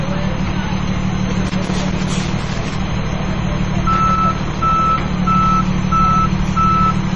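A recording of everyday sounds, it has a dull, watery character throughout: nothing comes through above 11.2 kHz, and quiet detail swirls and flickers while attacks blur. That points to heavy MP3 compression, likely at a low bitrate around 32 kbps, where the encoder cuts the treble and drops weak frequency content frame by frame. Bursts of irregular scratching and crackle break in from 1.47 to 2.75 s and again from 3.93 to 4.62 s. That is loose connector crackle: a worn or dirty contact making and breaking, chopping the signal, with any DC on the line adding pops.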